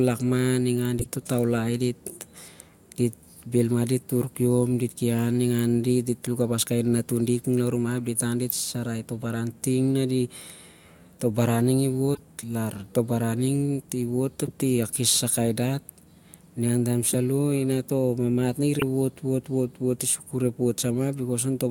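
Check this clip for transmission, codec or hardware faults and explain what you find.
Four short codec faults break into the speech. Corrupt frame decoded at 0.99–1.07 s, 8.50 s, 12.14–12.20 s and 18.79–18.83 s: damaged frames were decoded anyway, misplacing energy across frequencies, heard as brief chirps or blips peaking around -15 to -10 dBFS.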